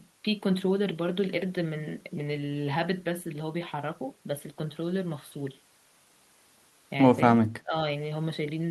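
From 7.61 to 7.75 s the speech sinks sharply, by around 20 dB. This is speech suppressed in double talk, likely from an echo canceller that mistook the talker for loudspeaker echo while both sides spoke at once.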